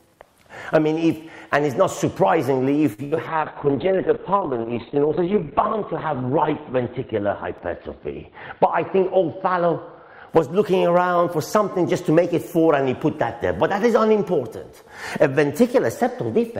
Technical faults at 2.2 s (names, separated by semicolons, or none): none